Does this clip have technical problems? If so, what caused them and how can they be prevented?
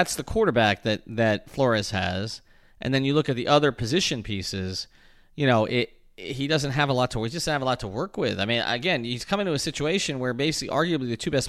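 No, there are no technical faults to hear in this clip. The speech comes through without any break, glitch or disturbance.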